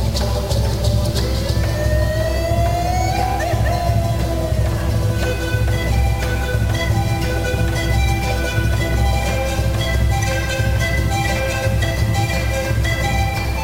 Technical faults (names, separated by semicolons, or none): stuck bit